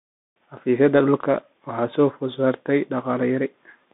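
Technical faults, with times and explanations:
Throughout, Bluetooth CVSD headset codec: the speech sits in a narrow telephone-style band, roughly 200 Hz to 3.6 kHz, with nothing at all above 3.8 kHz, so it sounds boxed-in and dull. The codec damage is plainly audible: CVSD codes each sample as a single up-or-down step with an adapting step size, which fits a 64 kbps link. Fast, loud high content outruns that step, so s sounds turn scratchy, and a grainy hiss sits under everything.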